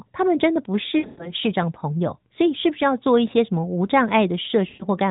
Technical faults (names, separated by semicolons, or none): lost AMR speech frames